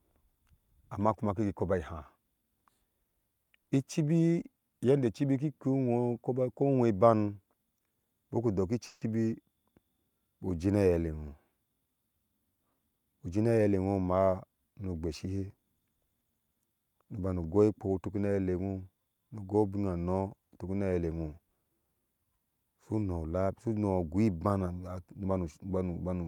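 From 8.87 to 9.08 s a call audio freeze stretches the last sound into a fading buzz or hiss for about 140 ms. Packets were likely held up, and nothing is lost afterwards, unlike a dropout. From 12.70 to 13.74 s a jitter buffer speed-up trims roughly 150 ms of pitch periods. Speech runs at 114% but keeps its pitch, unlike simple fast playback.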